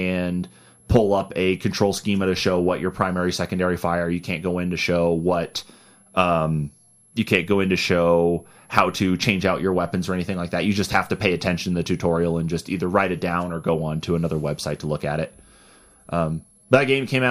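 A switching power supply in the recording chain is running in an audible mode for the whole clip, radiating its switching frequency into the audio path. The result is a switching supply whistle: a thin, high tone sitting around 11 kHz, wandering between roughly 10.8 and 11.2 kHz as the supply's load shifts. It stays well beneath the speech, around 35 dB down.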